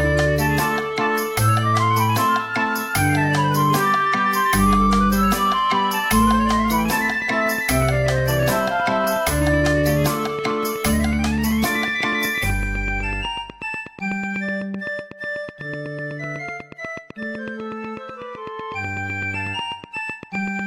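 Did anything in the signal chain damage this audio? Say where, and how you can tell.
Yes. From 6.86 s to 20.60 s a train of clicks ticks over the sound at a steady 8.1 per second, about a hundred in all, each peaking about 5 dB above the signal. The likely cause is interference in the analogue wiring or a faulty connection or power supply. Unlike random crackle or dropouts, the pulses share one shape, keep an even spacing, and continue through the pauses.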